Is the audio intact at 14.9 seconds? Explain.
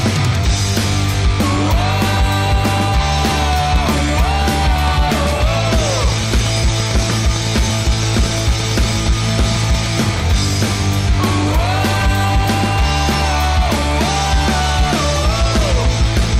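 Yes, the audio is intact at 14.9 seconds, with no dropout, click, distortion or other fault at that moment.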